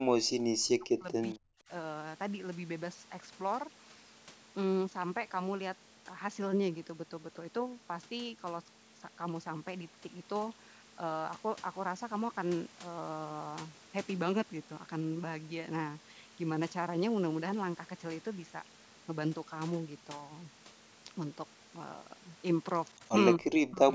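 The speech dips sharply four times: from 0 to 0.33 s, 0.56 to 1.16 s, 1.35 to 1.7 s, and again from 23.36 s to the end, losing up to several tens of decibels at its deepest. This is likely speech suppressed in double talk. While the far side was also speaking, the echo canceller could not tell this talker from loudspeaker echo and turned everything down together.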